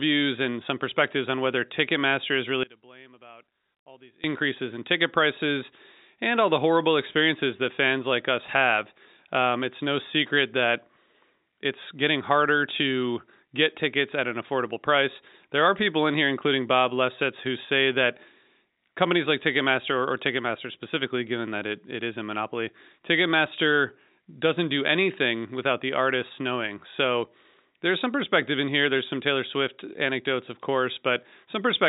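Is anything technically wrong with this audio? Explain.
Yes. From 2.63 to 4.24 s, right before "in ticket prices and", the speech falls about 24 dB, likely one channel inverted cancelling itself in mono.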